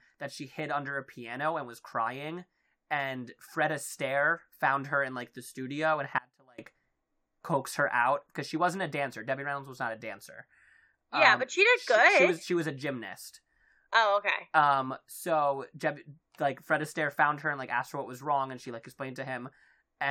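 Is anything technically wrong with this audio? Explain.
Yes. From 6.18 to 6.58 s there is an audio dropout to a faint residue. The likely cause is a brief break in the signal feed while the recording path after it stayed live, so roughly 0.4 s of speech is lost. The speech cuts out abruptly rather than pausing or fading, and the gap holds only a faint trace of the sound, around 30 dB below its normal level, before the speech snaps back.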